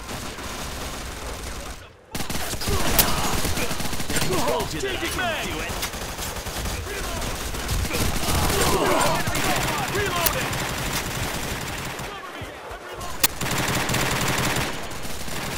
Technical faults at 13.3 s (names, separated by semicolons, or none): uninitialised buffer